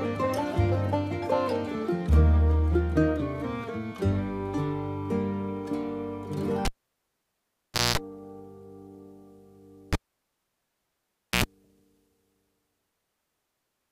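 A sharp pop at 6.65 s drops the audio into near silence for about 1.28 s. A short 60 Hz hum of about 0.21 s follows, and another pop brings the sound back at 7.98 s. The same pattern repeats from 9.93 s to 11.44 s, with about 1.46 s of silence and a briefer hum of about 0.08 s. Each is a cable pulled and plugged in while live: the tip alone touching the jack picks up mains buzz before the full connection restores the signal.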